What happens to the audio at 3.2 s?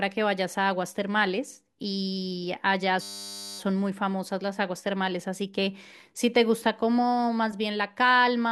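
A system hang loop runs from 3.02 to 3.59 s: a stalled driver lets the hardware replay one 10 ms buffer, producing a steady 100 Hz buzz.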